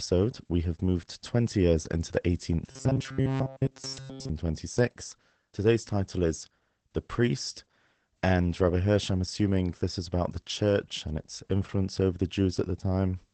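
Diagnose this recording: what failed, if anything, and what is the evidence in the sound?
The whole recording sounds muffled and slightly hoarse, with nothing above about 8.6 kHz and a faintly synthetic edge to the speech. That points to Opus voice compression at the codec stage, running the SILK linear-prediction coder in wideband mode. The damage is plainly audible, which suggests a low bitrate, on the order of 12 kbps. At that rate the coder spends too few bits on the excitation, so the voice loses its natural grain.

From 2.67 to 4.29 s the speech turns into a rigid, metallic buzz at 134 Hz that still loosely tracks the words. This is robotic sound from repeated short buffers, and it likely comes from the driver or buffer stage. When fresh audio arrived too slowly, the software kept replaying a chunk of about 7.5 ms, which fits the 134 Hz buzz. Most of the real audio in that stretch was skipped.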